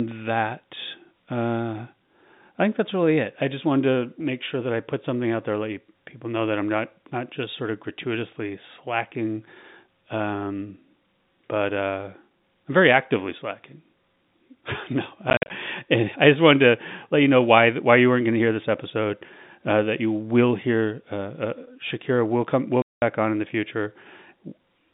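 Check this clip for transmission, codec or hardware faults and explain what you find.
Two bursts of packet loss filled with silence break up this telephone-band speech, whose 150 Hz to 3.7 kHz G.711 line band is clear on a spectrogram.

From 15.3 to 15.5 s, just before "I just wanted to", about 120 ms is dropped in scattered holes, the longest 50 ms. From 22.82 to 23.02 s, between "will come will" and "on in the future", a solid 200 ms gap appears. The hole sizes point to 10 ms packets. Missing packets were replaced with digital silence, so the waveform shows flat silent stretches with abrupt edges. The spectrogram shows blank vertical columns.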